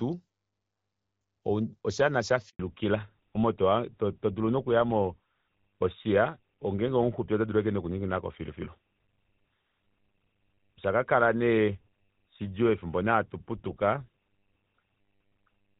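A speech recording on a phone call. From 2.49 to 2.59 s a handover gap leaves 100 ms of silence as the call switches networks and no speech frames arrive. From 2.59 s to the end, a fallback to narrowband strips everything above 4 kHz, turning the voice duller and rougher, consistent with a drop from HD Voice at around 12.65 kbit/s to GSM full rate.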